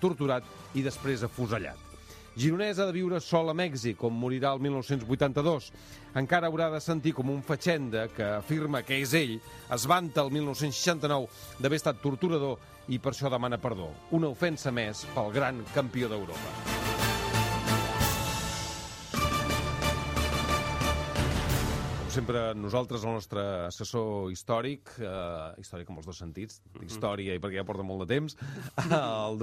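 From 8.76 to 11.86 s the sound turns thin, bright and hissy, with sibilant edges. This is pre-emphasis left on: a treble lift meant for transmission was never undone by the matching de-emphasis. The top end sits about 11 dB hotter at 10 kHz than at 1 kHz. Unlike a treble shelf, the boost rises steadily from around 3 kHz, which fits the 50 µs FM curve.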